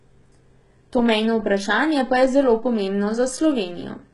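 Throughout the speech, the treble sounds synthetic and gritty, with s sounds turning metallic and lispy and nothing above 11.1 kHz. The likely cause is heavy HE-AAC compression, consistent with roughly 12 kbps, where spectral band replication rebuilds the upper band from copied lower harmonics.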